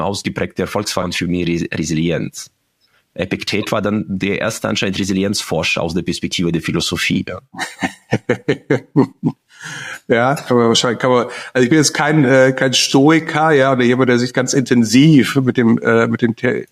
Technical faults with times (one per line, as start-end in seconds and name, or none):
1.02 skip ahead
1.60-2.02 jitter buffer speed-up